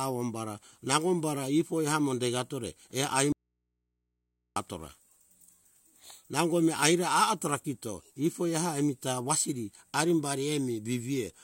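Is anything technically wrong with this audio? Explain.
Yes, there's an audio dropout to a faint residue from 3.32 to 4.56 s, right after "ifoi amo degatore err". The speech cuts out abruptly for about 1.2 s, leaving only mains hum roughly 55 dB down, likely from the signal being lost while the path after the break stayed live.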